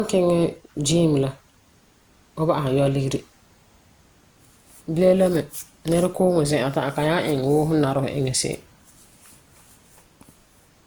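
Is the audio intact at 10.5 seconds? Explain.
No, not really. At 10.5 seconds you're hearing the same generation loss that runs through the whole speech clip. It's most likely from the audio being decoded and re-encoded around five times through a lossy codec, and the character fits Opus at about 64 kbit/s. Each pass quantises on a shifted frame grid, so the noise piles up, and you get that swirly, hollow, smeared texture with softened attacks, even though content reaches up to about 20.1 kHz.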